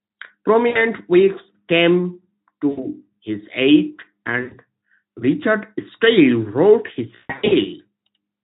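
VoIP packet loss concealed by the speech codec occurs at 0.69 to 0.80 s, 2.69 to 2.88 s and 4.41 to 4.55 s (about 60, 80 and 100 ms of audio missing), then at 7.15 to 7.53 s, where about 280 ms is lost in scattered gaps with a longest run of 140 ms. At each gap the decoder keeps extending its last pitch and filter at falling gain, so speech smears into a fading buzzy tone or coloured noise and stays weak briefly after packets resume.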